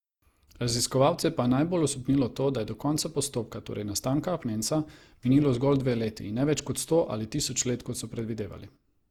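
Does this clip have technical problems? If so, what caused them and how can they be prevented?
Yes. Generation loss runs throughout this speech: a swirly, hollow, smeared quality with blurred attacks, likely from about seven successive Opus encodes at 64 kbit/s. Unlike a single low-bitrate encode, the damage exceeds what that bitrate alone produces. Prevent it by editing from a lossless master and encoding once.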